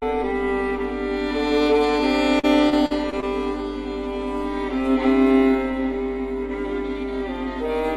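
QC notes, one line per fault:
2.39–3.24 s, repeated packet loss (robotic sound): five short dropouts in quick succession across this stretch of music, the longest about 40 ms, roughly 140 ms lost in total. Each hole is bridged by extending the preceding audio, so about a fifth of the span is synthetic fill rather than real signal. The repeated stitching of held fragments gives the passage a choppy texture, with brief pieces of the music audibly missing.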